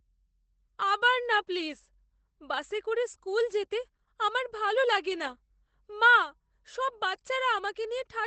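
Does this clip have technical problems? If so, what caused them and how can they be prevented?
Yes. Opus voice compression affects the whole clip. The damage is plainly audible, and nothing is present above about 8.6 kHz. That cut-off, together with the character of the distortion, points to Opus running its SILK linear-prediction coder in wideband mode at a low bitrate, around 12 kbps. At that rate the band is limited and the excitation signal is coded coarsely, so the speech loses detail throughout. To prevent this, encode at a higher Opus bitrate or keep an uncompressed copy for processing.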